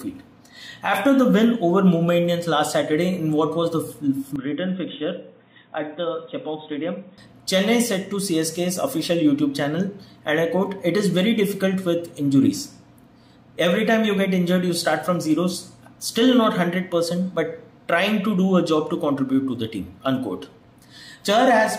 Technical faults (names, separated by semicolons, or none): input switched to a poorer device